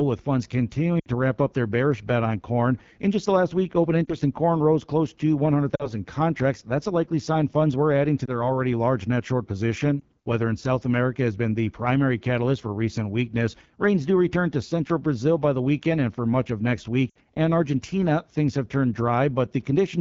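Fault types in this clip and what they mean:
AMR wideband (HD Voice) codec: the speech was squeezed through a low-rate wideband speech coder, fitting the 8.85 kbit/s mode, leaving it plainly rough and raspy throughout.
lost AMR speech frames: corrupted radio frames forced the decoder to repeat its last pitch and vocal tract settings at falling gain, causing brief dips and warbles, longest near 1.0 and 17.1 s.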